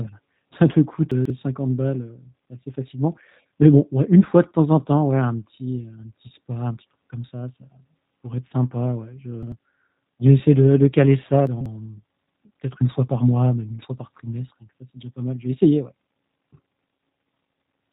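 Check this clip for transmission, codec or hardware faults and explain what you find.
Two faults are audible: G.729 codec coloration throughout, and three moments where chunks play out of order.

G.729 codec, whole clip: The speech is rebuilt from a coarse filter-and-pulse model, consistent with an 8 kbit/s G.729A encoding. It sounds rough and synthetic. On a spectrogram, everything above 3.8 kHz is empty.

Chunks out of order, at 1.12 to 1.30 s after "ça te coûte", 9.43 to 9.52 s after "être sympa ouais je", and 11.47 to 11.66 s after "de de caler ça": Blocks of roughly 46 ms play late, shuffling the sound into a jumble. The waveform shows abrupt discontinuities at each join.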